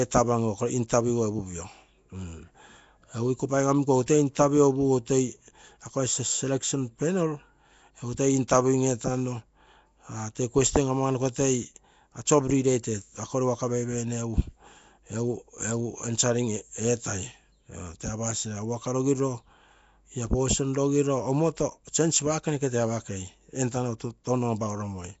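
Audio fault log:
throughout, Nellymoser compression: the speech was likely squeezed through the old Flash microphone codec, Nellymoser Asao, which codes short blocks at a fixed, very low bit budget, a rate consistent with about 32 kbps. Quiet bands get no bits and are filled with substituted noise, so every syllable carries a rough, hissy halo and the speech sounds smeared and underwater. Nothing reaches above 7.7 kHz, leaving the top end dull.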